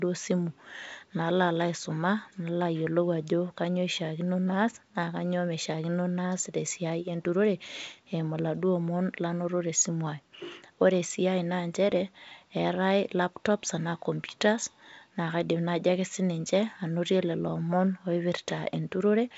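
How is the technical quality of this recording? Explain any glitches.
No glitches to explain: the speech comes over a 64 kbit/s G.722 wideband link, with the usual bandwidth up to about 7 kHz and at most a faint upper-band hiss, and no faults are audible.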